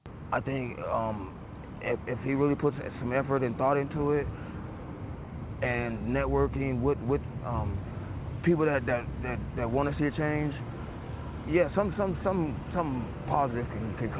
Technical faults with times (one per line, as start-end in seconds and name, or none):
none